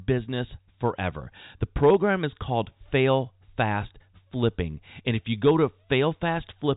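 No technical faults can be heard anywhere in this speech.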